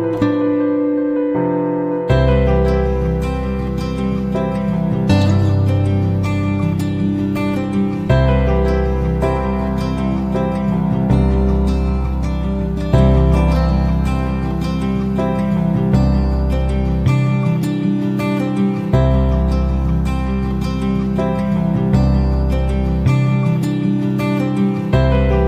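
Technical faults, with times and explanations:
No technical faults are audible.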